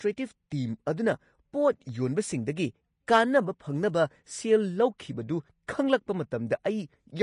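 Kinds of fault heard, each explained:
Vorbis compression: The audio was likely squeezed through a low-quality Vorbis encode. At that setting the encoder discards everything above 10.5 kHz and quantises the remaining treble so coarsely that fine detail is replaced by noise of similar energy. The damage is plainly audible: the speech sounds dull yet hissy and grainy, with roughened tones and softened consonant onsets, all of which fits a bitrate of roughly 31 kbps.
pre-echo: A transform codec spreads the quantisation noise for a whole block across every moment in it. When a sharp attack lands late in a block, noise sized for the loud part spills into the silence just before. That happens at 0.50 s, where a short burst of hiss about 12 ms long runs ahead of an attack, leaving the onset smeared and less crisp than it should be.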